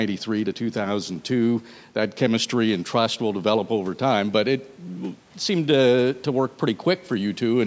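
No technical faults can be heard in this speech; the call microphone processing, which trims the lowest bass and leaves nothing above 8 kHz, is working as intended.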